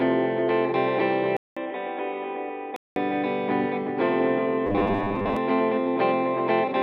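From 1.37 to 2.96 s, after a 200 ms gap, the music turns narrower and duller, drops about 5 dB in level and gains faint noise, likely an input switched to a poorer device. From 4.67 to 5.37 s, robotic sound from repeated short buffers imposes a rigid 100 Hz buzz, likely from roughly 10 ms chunks replayed while about half the audio is skipped.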